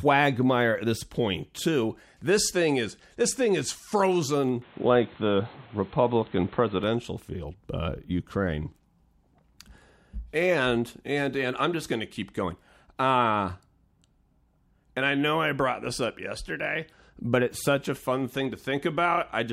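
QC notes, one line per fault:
4.62–6.84 s, likely input switched to a poorer device: dull, nothing above 4.2 kHz, level shifts about 5 dB, faint new background noise about 30 dB below the speech, unlike a filter; clears before "field uh".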